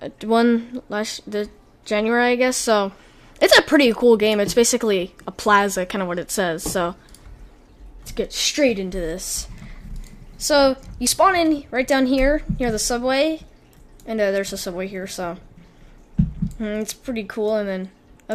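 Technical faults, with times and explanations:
No technical faults can be heard anywhere in the audio, which stays intact the whole way.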